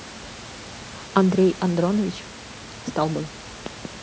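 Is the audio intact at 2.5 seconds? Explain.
Yes, the speech at 2.5 seconds is intact, with only the room's own background noise sitting about 18 dB below it as part of the recording.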